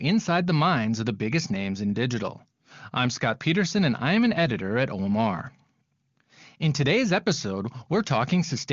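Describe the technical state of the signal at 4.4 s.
At 4.4 s the speech is intact, with the AMR wideband (HD Voice) coding sounding clear and showing at most faint traces of the codec.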